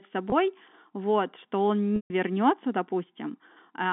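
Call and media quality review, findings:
Held buzzy tone at 0.30–0.32 s, just before "вот что он"; 140 ms dropout 1.96–2.10 s after "вот что он", fading to silence, cross-fade back. Packet loss with pitch repetition: jitter buffer replays last pitch period over the G.711 narrowband line, fitting one and about seven lost packets.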